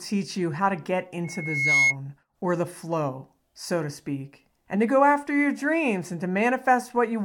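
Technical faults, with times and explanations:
1.24–1.96 s, loudspeaker feedback squeal: After "you how to get", a pure 2.2 kHz tone swells over about half a second to sit a little above the speech. It stops before "or the flow so". The microphone re-amplified its own loudspeaker, with loop gain above one there.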